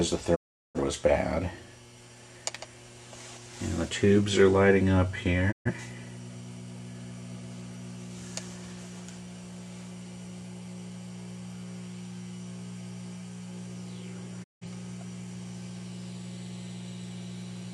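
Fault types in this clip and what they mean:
digital broadcast dropout: the receiver stopped getting good frames and muted until clean ones came back, so the sound fades out over about 20 ms at 0.34–0.79 s, 5.51–5.71 s and 14.42–14.66 s, and whatever was sent in those gaps is lost.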